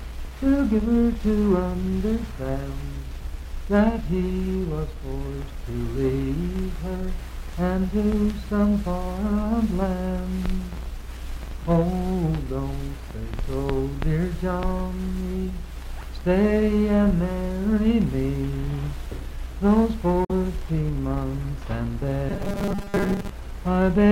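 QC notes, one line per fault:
20.25–20.31 s, Bluetooth dropout: the sound cuts to silence for about 70 ms, then resumes further along, as though it had kept playing during the gap. This is likely caused by audio packets reaching the headphones too late and being discarded. The loss of about 46 ms of material fits two lost frames. Unlike a buffer-repeat fault, nothing fills the hole. It is true silence, and the sound after it does not repeat.
22.29–23.32 s, robotic sound from repeated short buffers: for about a second the sound turns into a rigid, metallic buzz at a steady 200 Hz. It still loosely follows the shape of the original. The cause is likely new audio arriving too seldom, so the playback loops the last few milliseconds instead. A 200 Hz buzz fits a 5 ms repeated segment. Most of the passage, roughly two thirds or more, is repetition rather than real audio. Unlike a dropout, there is never silence, only the fixed-pitch drone replacing the natural movement.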